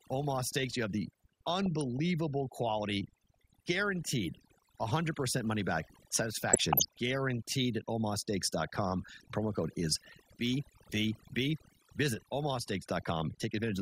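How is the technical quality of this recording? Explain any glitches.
The technical quality is poor, with one fault running through the whole speech clip and two short bursts of damage.

Overdone noise removal is present throughout. A noise reduction stage was pushed too hard, pulling individual frequency bands down or out whenever they sat near its noise estimate, taking quieter parts of the voice too. The background drops and breaks up into twinkling specks.

DAB burbling occurs from 1.50 to 1.99 s, between "you have the" and "quality guaranteed", and from 6.49 to 6.99 s, between "money back" and "guaranteed at". Weak reception let bit errors slip past error correction into the MP2 data, at a rate of a fraction of a percent, heavier in the second burst. Corrupted samples put short blips of noise in single sub-bands, and corrupted scale factors make sub-bands jump in level, which points to damage across roughly twenty frames each time. 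The result is short blips of noise and sub-bands jumping in level over the speech.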